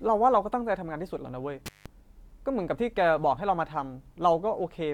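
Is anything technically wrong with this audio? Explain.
Yes. From 1.66 to 1.86 s the speech cuts out for about 0.17 s, with crackle at each edge and faint hiss in the gap, an intermittent contact as a loose cable or plug briefly opens.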